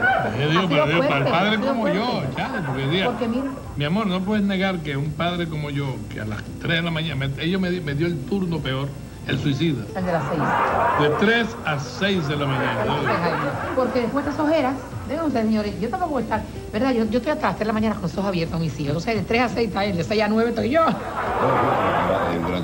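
From 21.43 s to the end at 22.63 s, playback slows by 5.34% and pitch falls 95 cents, nearly a semitone, a likely drift correction step by clock-matching software. On a spectrogram every harmonic steps down together, and waveform features stretch in time.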